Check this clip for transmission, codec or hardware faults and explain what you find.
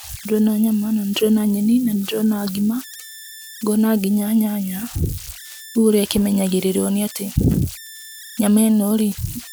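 One hardware fault runs through the whole speech clip: converter idle tones. An idle tone near 2 kHz sits in pauses, with grainy noise about 19 dB below the signal. An undithered delta-sigma converter is settling into repeating bit patterns at low levels.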